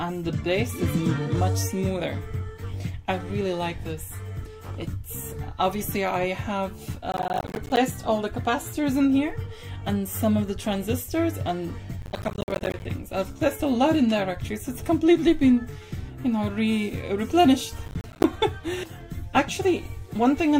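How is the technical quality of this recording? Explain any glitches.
The recording has three bursts of processor overload crackle, at 7.12 to 7.77 s, 12.02 to 12.85 s and 17.86 to 18.24 s. In each, the processor misses dozens of buffer deadlines over a short stretch. The gritty tearing fits buffers of around 10 ms, each dropping to silence with hard edges. A waveform would show a rapid comb of short flat gaps, and a spectrogram would show thin vertical broadband streaks.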